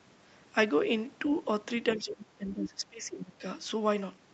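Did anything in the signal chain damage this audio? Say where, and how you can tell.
Yes, both problems sit in the call processing stage, around the echo canceller. There's some of the other side's voice leaking through: a faint second voice shows up from 1.92 to 2.01 s, roughly 20 dB under the talker, then again from 2.52 to 2.69 s, louder at roughly 10 dB under. The likely cause is the far end playing on the talker's loudspeaker and the canceller not fully subtracting it from the mic.

The second one is speech suppressed in double talk. From 1.96 to 3.44 s the talker's level sags, bottoming out around 20 dB down, with about a second and a half affected overall. That window overlaps both bursts of far-end sound, which is the giveaway. With both sides active at once, the canceller likely couldn't tell the near talker from the echo and turned the whole lot down rather than pass the echo.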